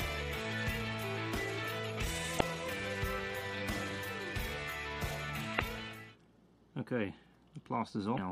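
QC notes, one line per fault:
2.37–2.42 s, 5.55–5.61 s and 8.14–8.19 s: damaged data in a compressed stream. Three short bursts, each roughly 55 ms, where a stretch of the encoded data has gone bad. The decoder can't make sense of those frames, loses its place and hunts for the next valid frame header, so you get a brief chirp, squawk, click or short hole where the sound should be, and playback picks up again just after it.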